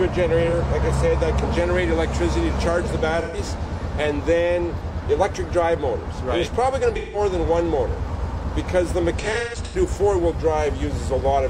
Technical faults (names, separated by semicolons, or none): AAC frame loss with concealment